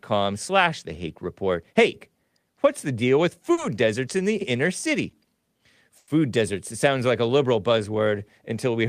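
Just after "what's the deal with", at 3.53 to 3.59 s, the speech briefly hangs, holding its last sound for about 40 ms with a faint buzz before resuming cleanly on "deserts in the inner". This is a short stall from a late packet: the jitter buffer emptied, so the receiver stretched the final sound until the packet arrived, adding a 40 ms delay without losing any speech.

From 5.98 to 6.10 s the speech freezes, with about 100 ms of sustained, fading buzz in place of fresh sound, then picks up exactly where it left off with nothing missing. This call audio freeze likely comes from packets held up in transit, which drained the jitter buffer and left the receiver filling the wait.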